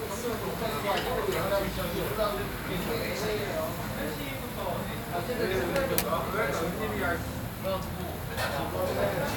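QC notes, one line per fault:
No faults found in the clip. Nothing in the audio calls for a timed entry.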